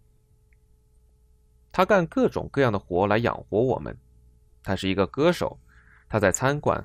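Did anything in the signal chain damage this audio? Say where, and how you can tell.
Yes. The codec stage is the first problem. The speech sounds dull for its whole length, with a granular, gurgling edge. Upper frequencies come and go as if bands were being switched off. What is left sounds coarse. This is plainly audible MP2 compression, likely at a low rate near 80 kbps. Layer II splits the signal into 32 sub-bands and shares out bits among them. With too few bits, top bands drop out and the rest are quantised roughly.

The second fault sits in the transmission path. At 1.09 s there is a brief burst of burbling. From 6.20 to 6.36 s there is a longer burbling patch over the speech. This is DAB burbling. Weak reception let bit errors, perhaps a few in every thousand, slip past error correction into the MP2 data. Corrupted samples put short blips of noise in single sub-bands, and corrupted scale factors make sub-bands jump in level for up to a frame, which gives the burbling sound.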